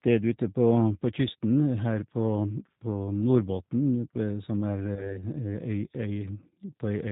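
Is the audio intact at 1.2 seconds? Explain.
No. At 1.2 seconds you're hearing the same G.729 codec damage that runs through the whole clip. The speech has been rebuilt from a simple vocal tract filter, a pitch predictor and a handful of pulses per short frame, rather than carried as the original waveform. That leaves it intelligible but noticeably rough and synthetic, with everything above 4 kHz gone. The degree of damage fits a low-rate, roughly 8 kbit/s, G.729A stream.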